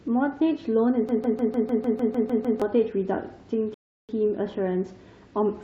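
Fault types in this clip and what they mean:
Broken-record loop: from 1.09 to 2.62 s, a 0.15 s fragment of the speech repeats back to back ten times. The likely cause is a stalled stream resending its last buffer. The spectrogram shows one identical narrow block tiled across that span, and the audio meant for it is gone.
Rebuffering stall: at 3.74 s the speech drops to dead silence for about 0.35 s while the player waits for data, then resumes exactly where it stopped. The waveform shows a flat gap and the spectrogram a clean empty column, with nothing lost.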